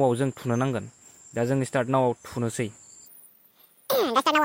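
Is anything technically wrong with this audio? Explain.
Yes. From 3.06 s to the end at 4.45 s, the audio is read two samples at a time (double speed): each pair of samples is taken as one frame, so the sound runs 2x fast and a full octave higher.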